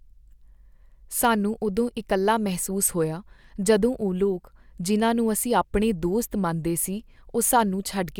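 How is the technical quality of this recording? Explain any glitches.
No technical glitches can be heard anywhere in this recording.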